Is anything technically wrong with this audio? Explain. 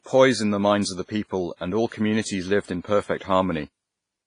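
Yes. Throughout the speech, the sound rings and washes, with hiss that breathes along with it, and nothing survives above 10.5 kHz. The likely cause is WMA compression. Coarse quantisation that points to a low bitrate near 24 kbps smears noise over time and zeroes weak detail.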